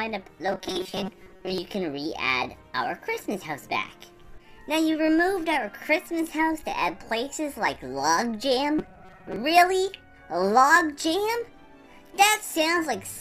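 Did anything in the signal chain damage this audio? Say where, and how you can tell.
Yes: robotic sound from repeated short buffers at 0.47–1.58 s and 8.79–9.36 s. A rigid 188 Hz buzz indicates a likely starved buffer stage replaying 5 ms blocks.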